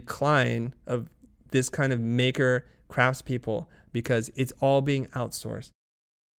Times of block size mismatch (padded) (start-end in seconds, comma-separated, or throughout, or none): none